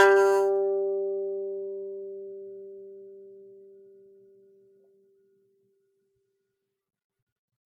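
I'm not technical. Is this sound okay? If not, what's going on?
No. The music has generation loss from start to finish. It sounds swirly, hollow and smeared, and sharp hits lose their edge. This is likely from being saved as an MP3 about ten times over, each save adding fresh damage.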